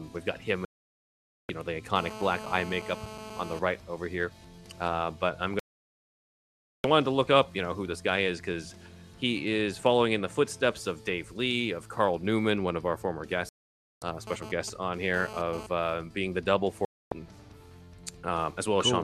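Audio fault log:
0.65–1.50 s, 5.59–6.85 s, 13.49–14.02 s and 16.85–17.12 s, digital broadcast dropout: the receiver stopped getting usable frames and muted, so the sound just vanishes for about 0.84, 1.25, 0.53 and 0.26 s and picks up further along, with whatever aired in the gaps gone for good.
1.96–3.59 s and 14.27–15.67 s, GSM phone buzz: a nearby 2G phone's 217 Hz transmit bursts got rectified in the audio path, giving a harsh, harmonic-rich rasp about 12 dB below the signal. It's steady in the first stretch, as during a call, and choppy in the second, as during data.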